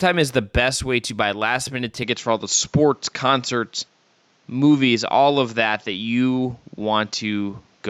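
From 2.03 s, after "to buy last minute", the speech turns duller, losing everything above 7.6 kHz and gaining faint background noise: likely an input switched to a poorer device.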